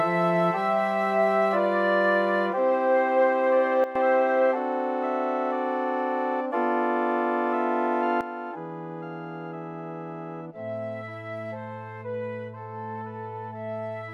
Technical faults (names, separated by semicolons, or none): sudden gain jump